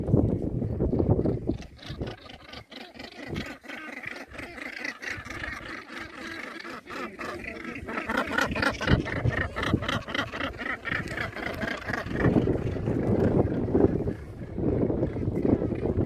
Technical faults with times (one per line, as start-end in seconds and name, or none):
none